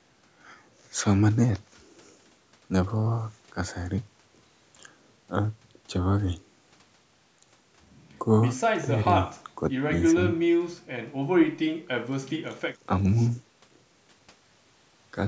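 No faults: the speech has passed through a call's microphone processing, which trims the lowest bass and leaves nothing above 8 kHz, both normal for that path.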